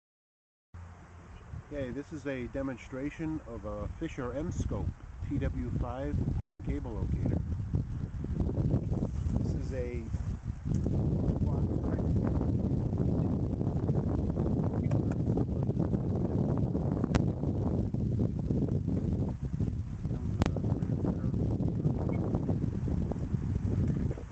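From 6.39 s to 6.61 s the sound stops advancing: the last fragment is stretched into a fading buzz that thins to silence for about 90 ms before audio resumes with roughly 200 ms of material missing. This is likely a long network dropout, concealed by the receiver.

At 17.15 s a single loud bang marks invalid numbers at full scale. A 10 ms block of infinite or invalid values was pinned to one extreme. A second 40 ms block, from 20.42 s to 20.46 s, gives a loud pop at each edge with nothing heard between. The call path's codec holds the audio to an 8 kHz band.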